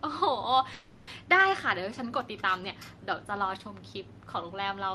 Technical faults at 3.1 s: none

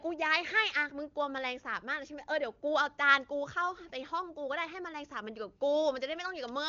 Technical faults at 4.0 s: none

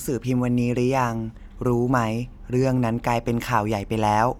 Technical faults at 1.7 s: none

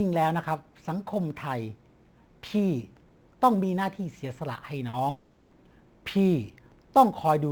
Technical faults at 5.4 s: sample clock jitter; long network dropout

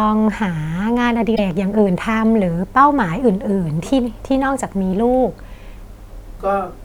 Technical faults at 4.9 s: damaged data in a compressed stream

